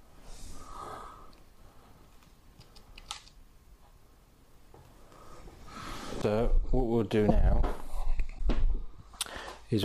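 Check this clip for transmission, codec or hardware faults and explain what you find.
Three short faults are audible, all of one kind: a broken MP3 bit reservoir, likely, at 6.21 to 6.24 s, 7.28 to 7.31 s and 8.37 to 8.40 s. When MP3 frames are dropped, the next frame reaches back for borrowed data and decodes someone else's bytes. Each disturbance lasts about 30 ms, roughly one 26.1 ms frame, which separates it from a single-sample click or a longer dropout.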